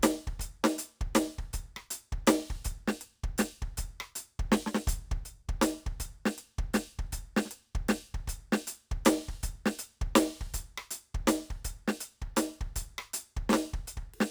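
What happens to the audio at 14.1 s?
At 14.1 s the music is still affected by crude rate conversion that runs through the whole clip. It sounds like a 32 kHz to 48 kHz change made by repeating samples without filtering, leaving inharmonic fizz roughly 20 dB below the music that follows loud, bright passages.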